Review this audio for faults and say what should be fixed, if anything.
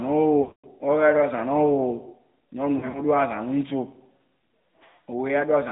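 AMR narrowband mobile codec throughout: the speech sits in a band of roughly 150 Hz to 3.7 kHz, with the buzzy, synthetic quality of a vocal-tract model driven by sparse pulses, which points to AMR-NB at about 10.2 kbps. Prevent it by using a wideband or higher-rate codec on the call path.

Lost AMR speech frames at 0.42–0.81 s: 220 ms of frames fail, so the decoder repeats the last pitch and vocal-tract settings at falling gain, stretching the sound and fading it to silence before recovery. At 2.78–3.02 s, 100 ms is lost in short runs spread over 160 ms, the longest 40 ms, giving choppy warbling dips. Prevent it by improving the radio link or adding stronger error protection.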